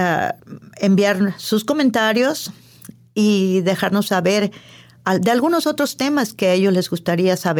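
No dropouts, clicks, distortion or level jumps are audible anywhere in the speech.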